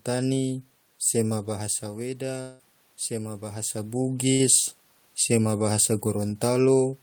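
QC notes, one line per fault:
1.47–4.04 s, automatic gain rising: the level drops about 9 dB as the talker moves back around 1.5 s, and the gain control slowly pushes up about 4 dB to compensate. Voice and room noise swell together over a couple of seconds, so the background audibly lifts too.
2.41–2.62 s, long network dropout: roughly 180 ms of audio just isn't there. Instead the last sound gets stretched into a fading buzz-hiss for almost the whole gap, with no true silence, and then it picks up further along. This is likely a network outage.
4.33–4.42 s, burst of packet loss: a short 60 ms hole, papered over by repeating the previous sound and fading it down. You hear a brief held buzz or hiss, then the audio jumps ahead.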